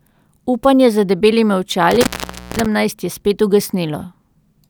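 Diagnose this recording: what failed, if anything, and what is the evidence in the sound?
An intermittent contact in the analogue wiring, most plausibly a loose cable or plug, briefly broke the signal path. Just after "za debelimi", around 1.91 s, the speech drops out with a burst of crackle as the connection opens. For roughly 0.53 s only faint hiss remains, since nothing but residual noise reaches the input while the line is open. Crackle returns as the contact remakes, and the speech resumes by 2.66 s with "je spet".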